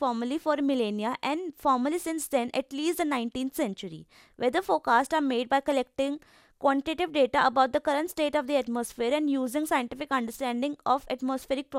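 From start to finish the speech has a swirly, hollow smear: consonant attacks blur, a watery texture clings to the sound, and nothing is present above 16.7 kHz. This is generation loss, likely from the audio being decoded and re-encoded around four times with a lossy codec whose character points to MP2 at about 128 kbit/s. Each pass requantised on a shifted frame grid, compounding noise beyond what one encode would leave.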